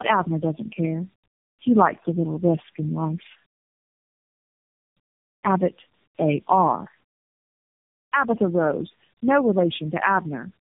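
Throughout, tandem speech coding: rougher and warblier than any single codec, consistent with about four codecs decoded and re-encoded in sequence, with nothing above 3.7 kHz.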